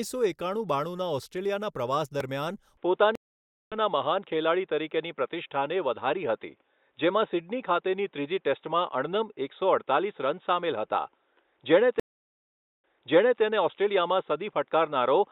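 Speech that turns dull and boxy from 2.77 s, just after "ઑસ્ટ્રેલિયાના પ્રવાસ દરમિયાન", and stays that way to the end. Nothing is left above 3.8 kHz, the level shifts by a few decibels, and a faint new noise floor sits far below the speech, with no gap at the change. That points to an input switched to a poorer device, likely a narrower-band microphone or headset call profile taking over mid-recording. There are also two stream reconnects, where the audio drops out and comes back at a different point. At 3.15 s, shortly after the same phrase, the sound goes silent for 0.56 s and resumes about half a second further on, so a piece of the speech is skipped. At 12.00 s a 0.84 s silence is followed by a restart 0.58 s earlier, so a short stretch is heard twice. In both cases the connection broke and a fresh decoder picked up mid-stream, jumping ahead the first time and repeating a resent burst the second.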